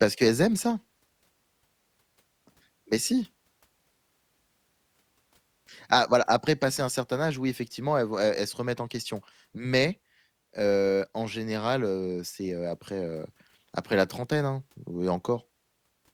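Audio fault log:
No faults turn up anywhere in this speech recording. Nothing in it calls for a timed entry in this log.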